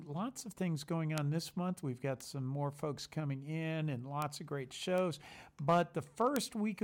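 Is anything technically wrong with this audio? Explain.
Yes. The speech carries five bit error spikes: at 1.18 s, between "of things going" and "this month"; at 2.21 s, just before "some more folks coming"; at 4.22 s; at 4.98 s, right after "of great"; and at 6.36 s. Each is a flipped bit that throws one sample (three at 1.18 s) off by a power of two before snapping back. The result is a bare tick, broadband and unrelated to the speech, peaking at about -16, -22, -16, -22 and -10 dBFS respectively. Unlike a mouth click or a splice, it has no acoustic shape or decay at all.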